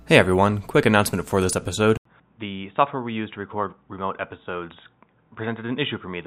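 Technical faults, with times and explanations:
1.97–6.26 s, input switched to a poorer device: right after "quick announcement for this" there's an 80 ms gap, then the speech goes dull and boxy with nothing above 3.8 kHz, drops about 10 dB, and picks up faint new background noise, likely a swap to a narrower-band mic.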